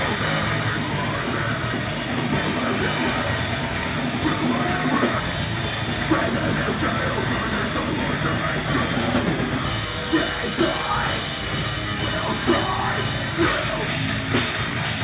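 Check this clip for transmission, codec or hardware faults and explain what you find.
Nothing audible here points to a transmission, codec or hardware problem.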